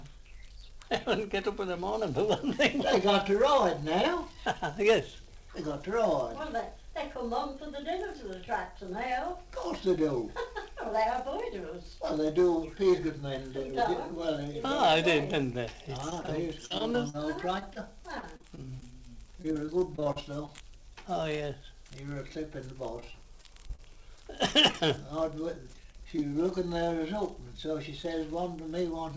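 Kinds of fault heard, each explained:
Repeated packet loss (robotic sound): Audio keeps dropping out in short bursts, with each hole papered over by stretching the last bit of sound, so it turns choppy. It runs from 16.1 to 20.6 s, with gaps up to about 43 ms, then returns at 23.0 to 24.8 s and 25.8 to 26.2 s. It all sits inside a band that stops at 8 kHz, which fits a wideband call codec like G.722.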